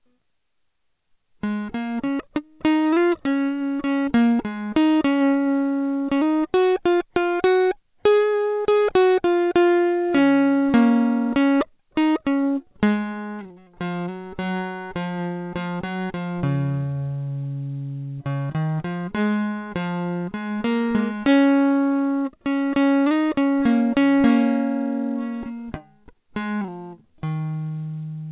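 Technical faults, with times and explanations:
No technical faults detected.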